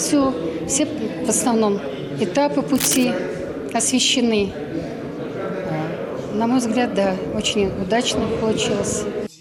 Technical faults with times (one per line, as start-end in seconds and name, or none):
2.75-3.05 cable scratch noise